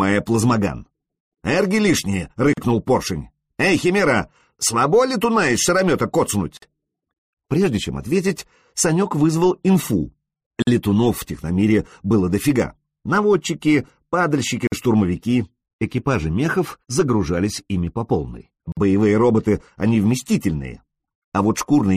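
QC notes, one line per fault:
2.53, 6.57, 10.62, 14.67 and 18.72 s: gap at a join of encoded pieces. Sound drops out for 40 ms, then 49 ms at each later join, every 4 s. Separately encoded pieces were joined untrimmed. Encoder start delay and end padding remain as silence.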